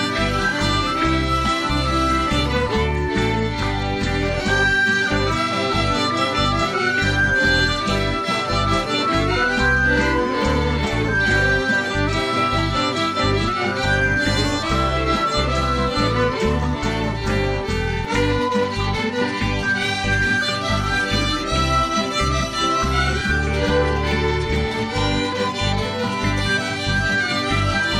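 No technical faults are audible.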